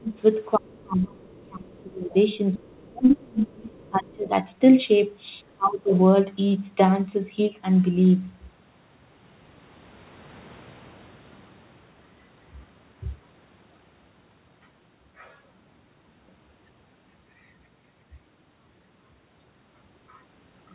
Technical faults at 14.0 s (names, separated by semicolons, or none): none